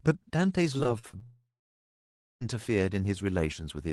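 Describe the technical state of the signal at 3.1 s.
At 3.1 s the speech is intact, passing cleanly through the call path with no dropout, glitch or distortion at that moment.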